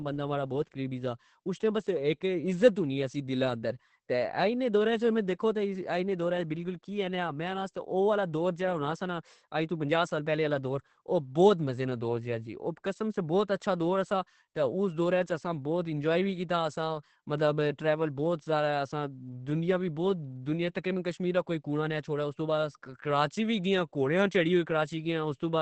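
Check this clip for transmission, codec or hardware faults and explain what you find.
One codec fault runs through the whole recording. Starved of bits, likely by Opus compression in its SILK speech mode at a rate that points to about 12 kbps, the wideband encoder discards everything above 8.5 kHz, leaving the speech heavily muffled, dull and hoarse throughout.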